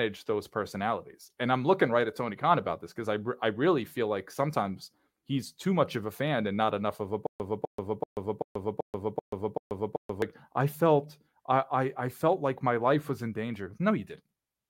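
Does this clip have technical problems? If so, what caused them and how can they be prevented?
Yes: after "not enough of a", from 7.27 to 10.22 s, there's a stutter with silent gaps. A 252 ms burst repeats eight times, every 385 ms, with 133 ms of dead silence between, until "I felt". It's likely a stalled stream replaying its last fragment. Deeper buffering and steadier network delivery should prevent it.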